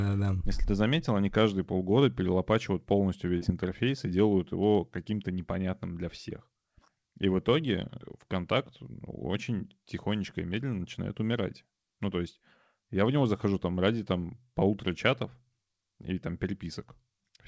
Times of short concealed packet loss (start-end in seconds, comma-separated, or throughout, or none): 3.38-3.44